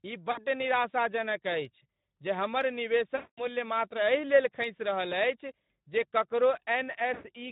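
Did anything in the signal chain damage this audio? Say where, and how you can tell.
Yes, at the codec stage. The whole clip carries Speex codec damage: the speech sounds noisy and hoarse, which points to a low-rate CELP coder starved of excitation bits, which fits a bitrate around 11 kbps. On a spectrogram the harmonics look smeared and grainy rather than cleanly striated, with a noise-like haze between them. The waveform shows no clipping, just coarse, quantised-sounding texture.

At the network stage there are three bursts of VoIP packet loss concealed by the speech codec: 0.31 to 0.46 s (60 ms missing), 3.15 to 3.45 s (220 ms, the longest) and 7.13 to 7.26 s (100 ms). In each, the decoder keeps repeating its last pitch and filter at falling gain, so the sound stretches into a buzzy tone or coloured noise that fades, and it stays weak or distorted briefly after real packets resume. A spectrogram shows frozen, flat content decaying in level, and the waveform shows a smooth envelope taper instead of a hard gap.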